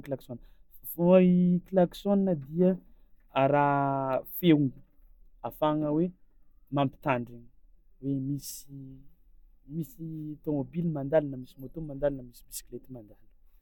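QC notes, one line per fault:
No faults found in the speech; nothing to log.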